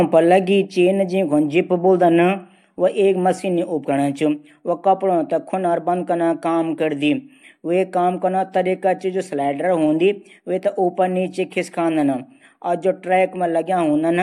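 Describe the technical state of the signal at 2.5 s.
The signal is intact at 2.5 s, with no dropout, distortion or other technical fault audible at that point in the speech.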